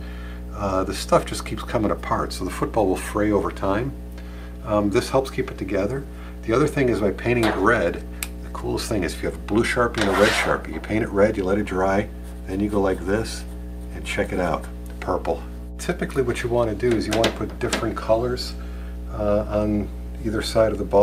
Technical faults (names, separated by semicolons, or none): mains hum